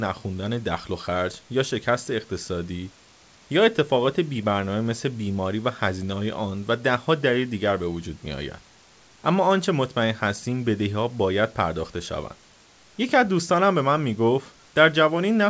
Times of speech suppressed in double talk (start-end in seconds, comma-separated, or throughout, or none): none